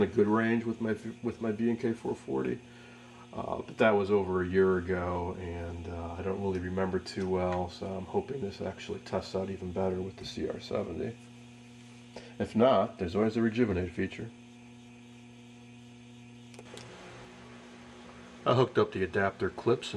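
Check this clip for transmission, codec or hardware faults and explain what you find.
Nothing stood out on listening to this clip.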